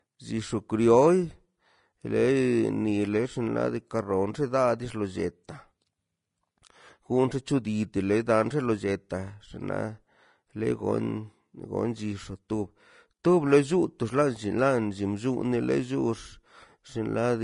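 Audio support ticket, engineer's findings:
Hissy, grainy treble on the speech for the whole clip. Nothing above 10.5 kHz. Likely Vorbis compression at a low setting, consistent with around 35 kbps. Fine high-frequency detail quantised into noise. Consonant attacks blurred, tones roughened. Damage plainly audible.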